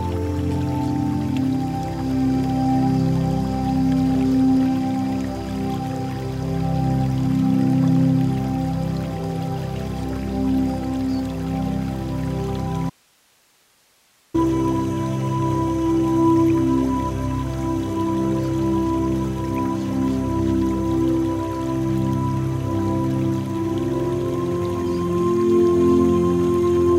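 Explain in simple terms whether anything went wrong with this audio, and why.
From 12.90 to 14.34 s the sound cuts out abruptly, leaving only faint hiss. This is an audio dropout to a faint residue, likely a brief signal loss while the line stayed live.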